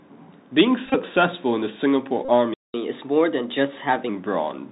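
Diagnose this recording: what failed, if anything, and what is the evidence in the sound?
The whole recording runs through the Bluetooth CVSD headset codec, a codec-stage fault, and the damage is plainly audible. Nothing passes above 4 kHz, which fits a 64 kbps CVSD link. The one-bit delta modulator's adapting step cannot keep up with loud, bright sounds, so sibilants turn scratchy and a granular hiss sits under the speech. On a spectrogram, energy stops at a hard ceiling near 4 kHz, with a speckled noise floor below it.

A Bluetooth headset packet repeated at two points, a network-link fault between headset and phone. From 0.86 to 0.95 s, about 52.5 ms of audio is lost across an 82.5 ms stretch, with the longest run about 20 ms. From 2.25 to 2.30 s, 33.8 ms is lost. The chip re-decodes the last good packet every 3.75 ms, which gives a short buzz near 267 Hz. A spectrogram shows evenly spaced harmonic stripes at multiples of 267 Hz, and the waveform repeats identical short cycles.

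A playback stall silences the output from 2.54 to 2.74 s, for 202.5 ms, cutting the speech off mid-flow. This sits at the playback stage, with a buffer underrun or a blocked audio thread as the likely cause. On the waveform it is a flat, near-silent stretch with abrupt edges. The spectrogram shows a clean vertical gap across all frequencies.

Catch-up at higher speed follows from 2.74 to 4.09 s. The player resamples its backlog at 1.15 times normal speed, so the speech is hurried and its pitch rises by about two semitones until normal rate resumes. On a spectrogram the voice harmonics are shifted upward and spaced wider for that span, then drop back. The waveform's syllables look compressed in time relative to the material around them.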